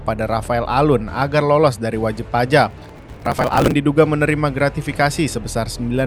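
From 2.71 s to 3.74 s the sound breaks into processor overload crackle. The processor cannot finish its audio buffers in time, and it misses one deadline after another. Each miss is skipped, leaving a short hole with hard edges. The gaps fit buffers of about 5 ms, and roughly a hundred of them go missing over that second. Heard together, they form a gritty tearing laid over the audio. It stops once the load eases.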